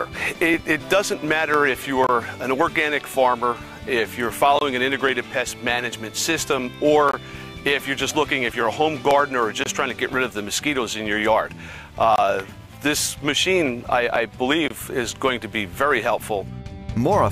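Short silences cut through the sound at 2.07, 4.59, 7.11, 9.64, 12.16 and 14.68 s. Each lasts about 23 ms. This is a gap between chunks. The audio arrived in 2.5 s blocks, and a stretch of silence sits at every join. Nothing is missing, but the flow stops briefly. Each hole recurs at a steady rhythm.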